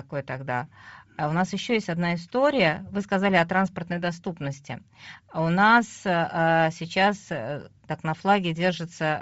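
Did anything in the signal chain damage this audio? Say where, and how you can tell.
Yes, at the codec stage: likely Bluetooth LC3 compression, consistent with about 32 kbps and 7.5 ms frames, throughout the speech. Its noise-filled upper band leaves a plainly breathy, grainy edge.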